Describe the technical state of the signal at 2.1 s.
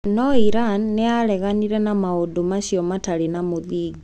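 At 2.1 s the speech signal is intact, with no audible dropout, distortion, or other fault at that moment.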